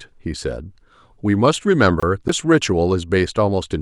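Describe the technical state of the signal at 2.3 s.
At 2.28 s there is a CD skip: the laser jumped to another turn of the disc's spiral, so the player muted for about 10 ms and resumed elsewhere. The speech gives a tiny tick, then carries on from a displaced point.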